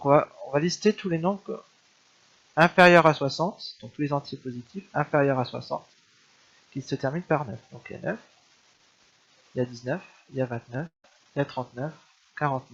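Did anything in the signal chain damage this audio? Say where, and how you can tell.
Yes. From 10.86 to 11.05 s, the sound turns into a fading buzz that repeats the last moment, then near silence, and resumes with about 180 ms missing. This is likely a long network dropout concealed by the receiver. Unlike a brief packet-loss glitch, the lost stretch never returns.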